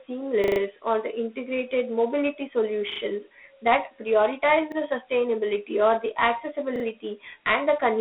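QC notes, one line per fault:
throughout: Dialogic VOX ADPCM. The speech has a gritty hiss that rides along with it and a boxed-in, telephone sound, with the band running from about 250 Hz to 3.5 kHz and nothing at all above 3.9 kHz. The damage is plainly audible. Each sample is stored as a coarse 4-bit step prediction, and that rough quantising leaves the grit. The narrow band and that level of damage fit a 32 kbps OKI-style ADPCM stream.
0.44–0.6, 2.92–3.0, 4.72–4.76, 6.76–6.84: repeated buffer. Each spot is a short stutter with a hard join at every repeat. At 0.44 s one short piece plays five times in a row, just before "or the integrated mobility". Just after that same phrase, at 2.92 s, a piece plays three times. At 4.72 s, after "that prioritize", a piece plays twice. At 6.76 s a piece plays three times. New audio arrived late, so the device replayed its last 40 ms chunk instead. Almost nothing is skipped, so each repeat pushes the speech later rather than cutting it.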